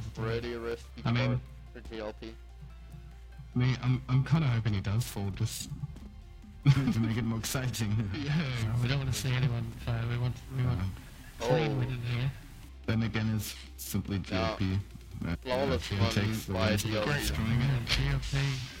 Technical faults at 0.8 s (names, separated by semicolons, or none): periodic clock jitter; CD scratch ticks